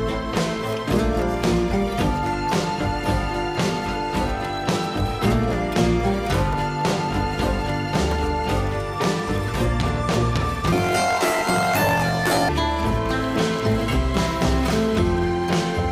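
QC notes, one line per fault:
10.73–12.49 s, planar audio read as interleaved: The sound jumps an octave high with a rough buzz at 45.9 Hz. Each block of about 22 ms plays twice at double speed, left half then right half. This keeps the pace but doubles the pitch.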